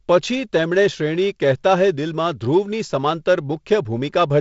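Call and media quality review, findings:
No faults found: the speech carries G.722 wideband telephone coding with nothing above about 7.7 kHz and a faint upper-band hiss plus slightly noisier low band, which fits G.722 running at 48 kbit/s.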